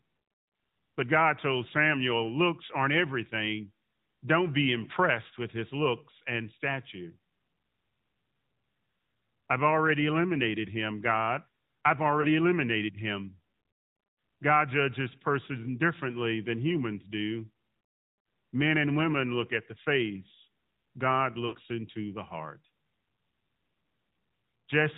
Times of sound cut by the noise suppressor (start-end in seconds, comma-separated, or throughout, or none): none